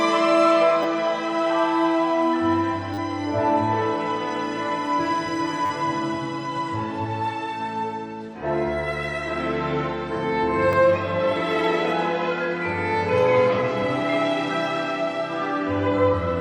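Repeated buffers hit at 0.83–0.85, 2.94–2.98, 5.66–5.70 and 10.73 s: a 10 ms chunk gets replayed when fresh audio runs late, so you hear brief buzzy stutters.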